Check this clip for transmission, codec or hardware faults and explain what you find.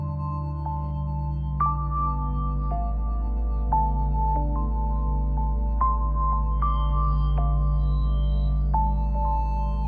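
Nothing stood out on listening to this music clip that would point to a transmission, codec or hardware problem.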